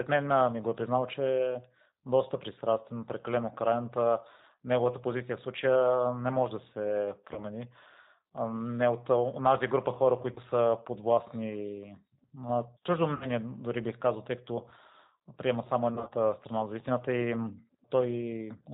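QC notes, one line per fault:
throughout, G.729 codec: the speech is bandlimited with nothing above 4 kHz, and has a slightly rough, synthetic edge that is plainly audible. The decoder rebuilds each 10 ms frame from a vocal-tract filter, a pitch predictor and a few pulses, so the damage is a buzzy, modelled texture rather than the swirly or watery smearing of a transform codec. This fits an 8 kbit/s G.729A stream.
7.34–7.44, 10.32–10.40, 13.15–13.27, 15.95–16.13, VoIP packet loss concealed by the speech codec: at each of these points the decoder stretched the last pitch and filter into a fading buzzy tone or coloured noise. The first comes after "не може да се", the second between "от онази група хора" and "са подвластни на чуждо", and the last between "приема само" and "страна за истината и". Gaps of 20, 40 and 60 ms grow progressively. The last event scatters 100 ms of loss over 160 ms. 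The speech stays weak after each gap because every frame builds on the previous one, which separates this from a clean dropout or click.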